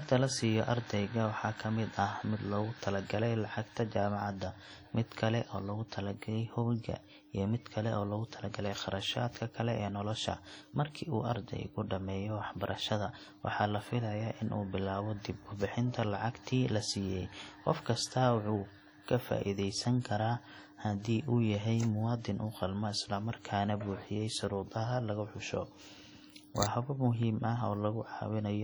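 WMA compression artefacts run heavily throughout this speech clip: ringing, a washy smear and a hiss that breathes with the voice. The likely cause is a transform encoder at a bitrate around 32 kbps, spreading quantisation noise across long blocks and zeroing weak spectral detail.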